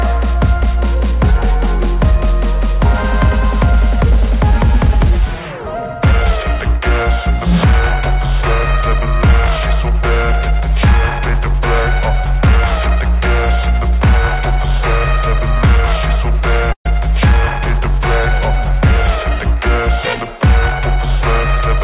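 At 16.72 s there's a burst of packet loss running to about 16.86 s. A short run of packets never arrived in time, so the receiver stretched the last bit of sound it had across roughly 127 ms, fading it down until the fill was effectively silent for around 90 ms. When playback picks up, about 130 ms of the original audio has been skipped. All of this sits inside the call path's narrowband G.711 audio, with nothing above 4 kHz.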